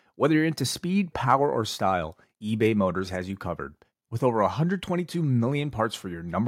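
No technical fault can be heard anywhere in the speech, with the signal holding steady throughout.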